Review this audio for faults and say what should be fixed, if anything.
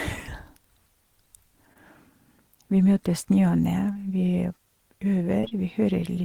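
Short concealed packet loss occurs at 1.73–1.77 s, 3.93–3.97 s, and three times back to back from 5.41 to 5.53 s. Each time about 20 ms of audio arrived too late, and the decoder filled the gap by extending the preceding sound, which leaves a brief smear or wobble rather than the hard silent hole of an unconcealed dropout. A larger jitter buffer or forward error correction would prevent it.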